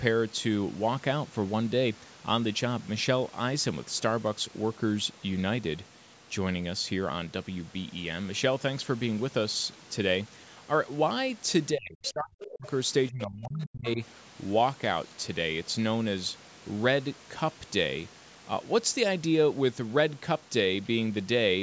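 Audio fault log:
11.73–12.66 s and 13.09–13.99 s, speech suppressed in double talk: the speech sinks sharply, by as much as around 40 dB, for about a second and then well under a second. This is likely an echo canceller turning down the talker while the far end also spoke.
12.04–12.12 s and 12.42–12.50 s, other side's voice leaking through: brief, faint scraps of a second voice, roughly 15 to 20 dB below the speech, surface during the first suppressed stretch. This is likely loudspeaker sound the echo canceller failed to remove from the microphone.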